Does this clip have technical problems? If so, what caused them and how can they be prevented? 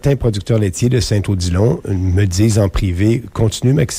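No, nothing in this audio stood out as a technical problem on listening, so there is nothing here to trace or prevent.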